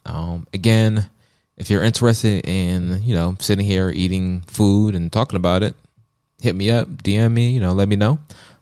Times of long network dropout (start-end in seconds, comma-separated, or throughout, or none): none